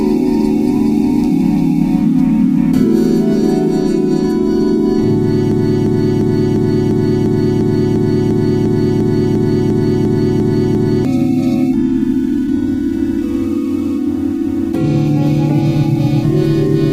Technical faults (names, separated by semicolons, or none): broken-record loop